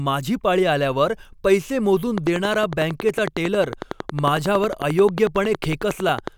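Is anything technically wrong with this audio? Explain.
Yes. A train of clicks starts at 2.18 s, just after "पाळी आल्यावर पैसे मोजून", and runs to 6.29 s. About fifty similar pulses arrive at a steady 11 per second, roughly 10 dB above the speech. They are likely electrical interference or a faulty connection or power supply. They sound like loud, even ticking through the speech and pauses.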